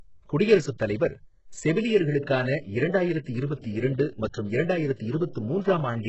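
Throughout the clip, the speech has likely passed through HE-AAC compression at a very low rate, with heavy damage that fits roughly 8 kbps. Only the lower band is coded properly. The upper band is rebuilt by copying lower content upward under a coarse envelope, and nothing reaches above 8 kHz. The result is treble whose harmonics don't match the body of the speech, so sibilants come across as gritty, metallic and lispy.

From 5.33 to 5.36 s, pre-echo appears ahead of a sharp onset. The codec's transform block spread quantisation noise sized for the loud attack across the whole block, including the quiet stretch just before it. That noise fills about 29 ms in front of the attack as a brief hiss, and the onset itself loses its crispness and sounds smeared rather than cleanly struck.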